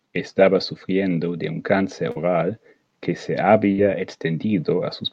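At 2.11 to 2.18 s there is a short concealed packet loss: about 40 ms of the speech failed to arrive in time, and the decoder covered the hole by extending the preceding sound before crossfading into real audio again. It is heard as a brief smear or wobble. On a spectrogram, the harmonics run unnaturally flat through the gap; the waveform shows a repeated, slightly too regular cycle pattern.

From 3.72 to 3.80 s a burst of packet loss removes about 60 ms of speech. The receiver kept the last sound going and lowered it as the gap continued, so a held buzz or fading hiss sits where the real audio should be, and the speech then picks up further along with that stretch missing. A spectrogram shows frozen, fading bands ending in an abrupt jump; the waveform envelope decays, then steps back up.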